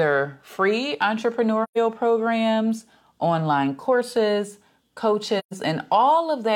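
A speech clip with two short muted gaps, from 1.63 to 1.78 s, just before "programs online courses", and from 5.39 to 5.53 s. Each is AAC frame loss with muting: the decoder zeroed the spectrum for the lost stretch, about 128 ms, which fits three consecutive frames. The overlapping windows fade the sound out and back in, so the edges are soft. A spectrogram shows a clean vertical blank band across all frequencies; the waveform tapers into flat silence.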